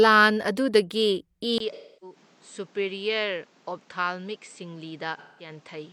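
An input switch to a poorer device, the likely cause, at 1.58 s leaves a brief gap. The sound then turns dull, with nothing above 8.4 kHz, drops roughly 10 dB and gains a new noise floor. AAC frame loss with concealment follows from 1.73 to 2.16 s and from 5.17 to 5.50 s. The decoder fills the missing stretches of about 0.3 and 0.2 s from earlier spectra, giving smeared, phasey patches.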